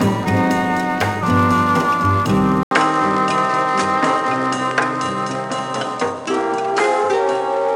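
At 2.63 s the sound cuts out for 80 ms. It returns duller, with nothing above 10.2 kHz, a faint new background noise and much the same level. This is likely an input switched to a poorer device, lasting to the end.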